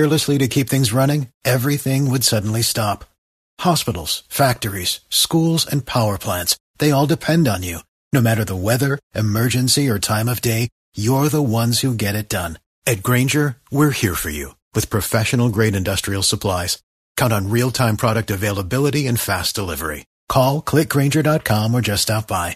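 No technical faults can be heard anywhere in this speech recording.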